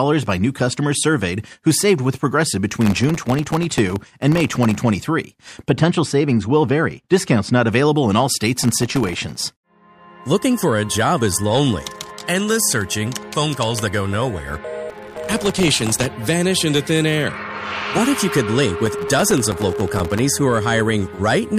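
From 2.81 to 4.75 s, processor overload crackle begins. The processor repeatedly fails to fill its very short buffers, each under a millisecond, in time, and each miss drops a sliver of silence with hard edges. Many such gaps in a row make a gritty, tearing crackle over the sound.

Between 5.69 and 7.69 s, de-emphasis applied wrongly cuts treble that never needed restoring. The response slopes down to about 10 dB lower at 10 kHz than at 1 kHz, so the sound turns dull and muffled.

The processor overload crackle returns from 8.63 to 9.52 s, 14.90 to 16.06 s and 18.86 to 20.19 s, with the same dense run of silent dropouts tearing through the sound until the load eases.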